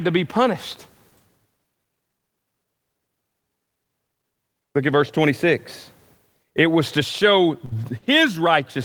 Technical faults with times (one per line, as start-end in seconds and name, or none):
7.65-7.75 burst of packet loss